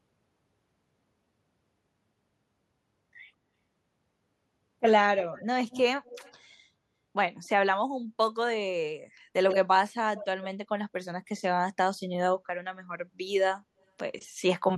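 Echo leak appears at 5.32–5.45 s, 5.71–5.8 s and 6.05–6.34 s, then again at 9.49–9.59 s, 10.16–10.26 s and 10.42–10.47 s. Short, faint delayed copies of the speech trail the original by 159 ms in the first group and 90 ms in the second. Most sit well below the direct sound, but the one at 9.49 s is nearly as loud. This is likely a far-end loudspeaker whose echo canceller let part of the returned signal through.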